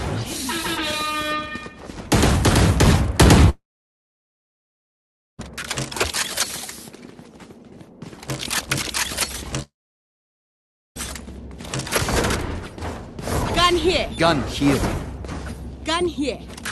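Twice the audio goes missing, at 3.49 to 5.40 s and 9.62 to 10.98 s, the likely cause being a long network dropout: with nothing arriving, the receiver briefly extends the last sound as a fading buzz or hiss, then goes silent until the audio resumes with that stretch lost.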